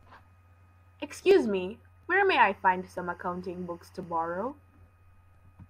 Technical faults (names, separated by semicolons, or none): timecode bleed